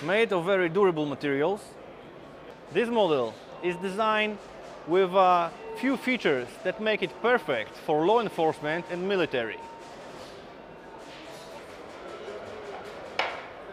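No faults detected in this audio; nothing to report.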